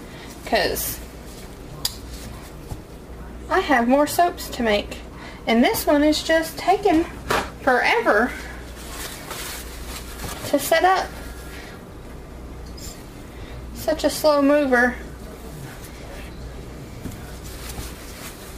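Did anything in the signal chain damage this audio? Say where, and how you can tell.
Yes. Crude rate conversion at the sample-rate stage, from 48 kHz to 44.1 kHz by nearest-sample picking, leaves an inharmonic fizz throughout, roughly 25 dB down, tracking loud highs, unlike steady hiss.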